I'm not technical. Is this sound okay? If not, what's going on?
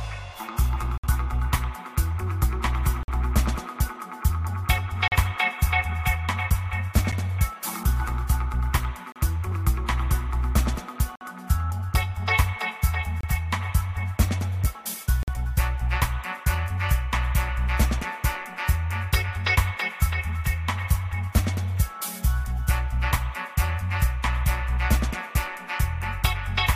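No. There are gaps between stream segments: brief, hard-edged silences of up to about 60 ms at 0.98, 3.03, 5.08, 7.12, 9.12, 11.16, 13.21 and 15.23 s, one every two seconds. Unlike dropouts, nothing is lost. The sound pauses and resumes exactly where it stopped.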